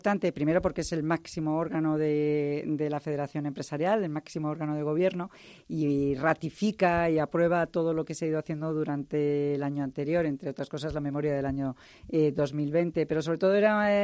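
No technical faults can be heard anywhere in the recording.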